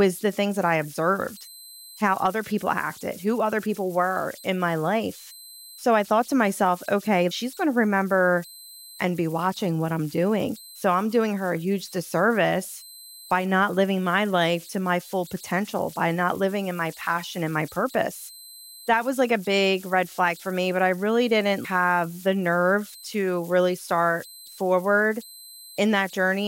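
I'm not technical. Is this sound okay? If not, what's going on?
No. Converter idle tones run throughout: on quiet passages the recording chip falls into a repeating pattern, leaving a whistle around 4 kHz in pauses. Unlike hiss, it has a definite pitch.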